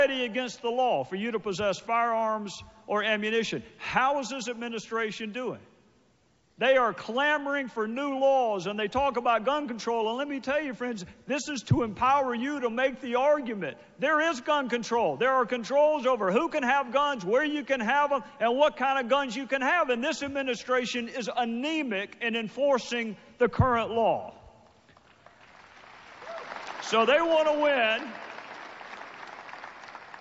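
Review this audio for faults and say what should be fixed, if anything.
Nothing needs fixing: the audio arrives intact through the WebRTC call path, with only the ordinary coding character of a G.722 link at 64 kbps.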